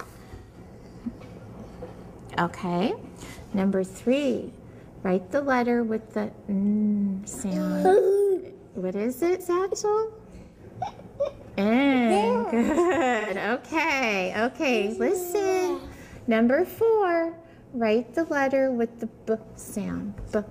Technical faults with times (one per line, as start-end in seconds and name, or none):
0.35-0.54 AAC frame loss with concealment
10.42-10.62 AAC frame loss with concealment
13.19-13.31 AAC frame loss with concealment